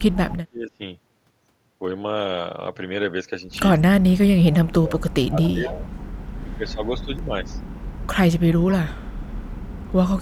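From 0.0 to 0.81 s, the speech sinks by as much as 30 dB. This is speech suppressed in double talk, likely from an echo canceller ducking its own talker along with the loudspeaker echo when they overlap. It happens again from 3.87 to 5.77 s, dropping about 35 dB, and from 6.43 to 7.58 s, dropping about 15 dB.

Near the end of the middle dip, at 5.43 to 5.5 s and 5.66 to 5.85 s, short scraps of the speech return 230 ms late. This is echo leak, likely loudspeaker pickup the canceller missed. The copies sit about 15 to 20 dB below the speech.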